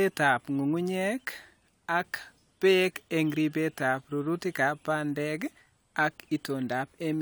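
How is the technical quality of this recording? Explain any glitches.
The technical quality of this recording is sound, with no glitches to explain.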